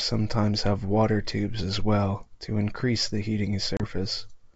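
A hard-edged hole of silence cuts into this speech clip at 3.77 s, just after "well to increase the", and the sound comes back at 3.85 s with brief distortion before settling. This is packet loss on an ADPCM call: about 30 ms of data, a few packets' worth, went missing and was filled with silence, leaving the receiver's adaptive predictor and step size out of step with the sender's until they re-converge over the following tens of milliseconds. The G.722 wideband telephone coding carries clear speech up to 7 kHz.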